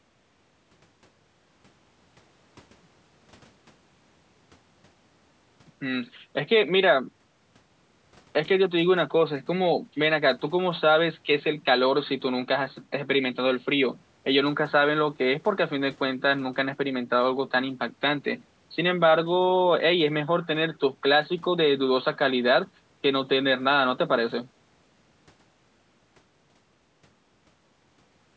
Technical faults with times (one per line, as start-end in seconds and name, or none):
none